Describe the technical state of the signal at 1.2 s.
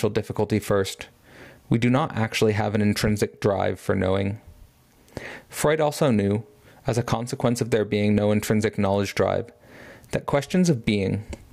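At 1.2 s loud and soft parts sit closer in level, squashed together; this gain pumping runs through the whole clip. It is likely from gain set far too high, with a fast limiter pulling it back by roughly 20 dB on every peak.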